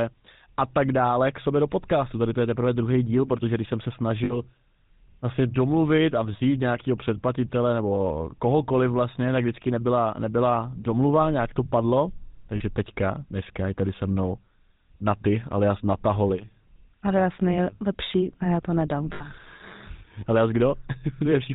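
Speech has been coded with the GSM full-rate codec, which fits a 13 kbps stream. Its vocal-tract model is driven by sparse, regularly spaced pulses, and nothing above 4 kHz survives, so the voice is muffled and carries a plainly audible buzzy, gravelly roughness throughout. On top of that come lost GSM frames, where the decoder stood in for missing data by repeating the last good frame's settings. This leaves short rough, metallic rings in place of the sound at 4.24–4.38 s, 12.56–12.62 s and 19.12–19.23 s. The concealed spans are 60, 40 and 80 ms, the last pointing to about four dropped frames.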